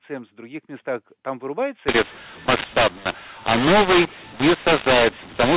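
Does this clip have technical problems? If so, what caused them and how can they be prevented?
Yes. From 1.88 s to the end at 5.56 s, the speech turns harsh and distorted, and the pauses fill with noise. This is a mu-law and A-law mix-up. The G.711 telephone stream was encoded with A-law but decoded as mu-law, so each 8-bit code maps to the wrong level on the logarithmic curve. Some samples come out too loud and others too quiet, and near-silent samples are raised well above silence. Before 1.88 s, the A-law coding decodes correctly, with audio limited to 4 kHz. To prevent this, signal the G.711 law explicitly at both ends of the call, for example through the negotiated payload type, and make the decoder follow it rather than a default.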